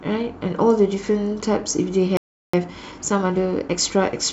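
At 2.17 s the speech cuts out into a playback stall: the waveform drops to a flat line and the spectrogram shows a blank vertical band for about 0.36 s, until 2.53 s. The player most likely ran out of buffered data or had its thread blocked.

From 2.53 s to 4.27 s comes a time-compressed catch-up. The speech runs about 1.15 times faster at unchanged pitch, as small segments are spliced out and cross-faded. Harmonics stay level on the spectrogram, but syllables appear squeezed closer together.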